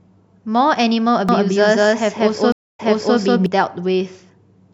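From 1.29 s to 3.46 s the speech carries a doubled audio track: a second, full-band copy runs roughly a fifth of a second behind the original at about the same level, giving a distinct slapback rather than a reverb tail, since the copy has no decay or room colour. It cuts in and out abruptly at both ends. The likely cause is the same signal reaching the mix twice, once through a slower capture path.

At 2.52 s a stream reconnect breaks into that passage. The sound drops to silence for 263 ms, then resumes 392 ms earlier than where it stopped, so a short stretch of speech is heard again. The fresh decoder starting mid-stream makes the first frame come back faded in, and the gap and repeat run to 3.18 s, overlapping the doubled copy throughout.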